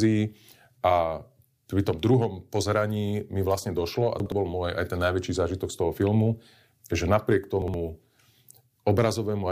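At 4.2 s, after "mi vlastne došlo a", and 7.62 s, after "filmu že napriek", chunks out of order: a 60 ms chunk plays one slot late, giving 0.12 s of jumbled speech with three hard joins.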